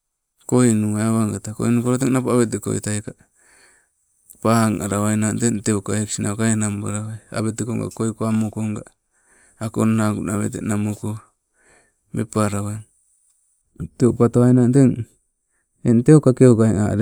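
A speech clip with de-emphasis applied wrongly from 13.62 s to the end at 17.01 s. A treble cut meant to undo pre-emphasis acts on audio that never had it, or is applied a second time. The response slopes smoothly downward, reaching about 11 dB down at 10 kHz relative to 1 kHz. The sound turns dull and muffled.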